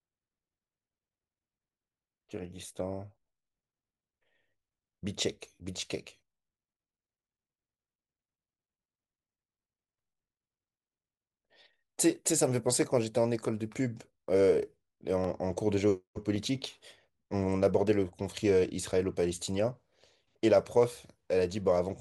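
The stream likely dropped a fraction of a millisecond of samples at 2.45, 5.66, 12.82, 15.24 and 16.36 s, so the waveform jumps and each spot in the speech gives a single sharp click.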